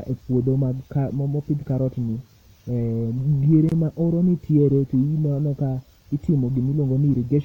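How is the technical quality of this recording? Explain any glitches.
The speech has one audible glitch. From 3.69 to 3.72 s, a brief hole of about 25 ms cuts into the speech, with smeared edges, before it resumes exactly where it stopped. This is a gap at a join of encoded pieces. The audio was encoded in roughly 4-second segments and spliced without trimming, so the encoder's leading delay and last-frame padding remain as silence at the join.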